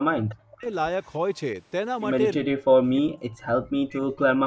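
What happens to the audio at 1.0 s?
From 1.03 to 1.15 s a faint delayed copy of the speech surfaces, trailing the original by about 304 ms and sitting far below the direct voice. This is an echo leak, likely from a loudspeaker on one side of the call whose echo canceller let some of its microphone's pickup through and sent it back. The returned fragment is brief, and like the rest of the call audio it carries nothing above 8 kHz.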